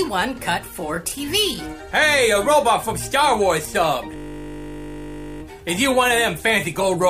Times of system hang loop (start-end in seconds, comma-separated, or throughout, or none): 4.16-5.42